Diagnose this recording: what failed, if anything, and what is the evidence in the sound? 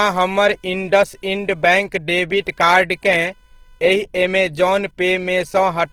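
A faint buzz sits well below the speech throughout, pulsing at around 500 times a second and chirping with the load rather than with the talker. This is computer activity noise. It arises in the analogue wiring, where processor or graphics load currents modulate the shared ground reference of the audio circuit.

Throughout, the speech sounds grainy and rough. Its harmonics are smeared into noise, although the bandwidth still reaches about 20.2 kHz with no muffling. The likely cause is the codec stage: Opus compression in its music (CELT) mode, consistent with a low rate near 16 kbps, filling starved bands with folded or noise content.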